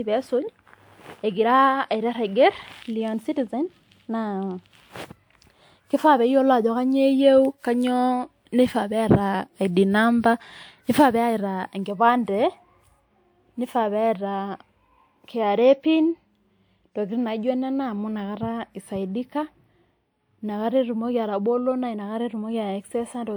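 A speech recording with generation loss throughout: the sound is swirly, smeared and hollow, and consonant attacks blur, yet the band still reaches about 20.1 kHz. That full bandwidth separates it from a single low-bitrate encode, which would cut the top end. Here the damage points to repeated lossy passes, likely around five decode-and-re-encode cycles of a codec such as WMA 1 at 128 kbit/s, each re-quantising on a shifted frame grid so noise and spectral holes pile up.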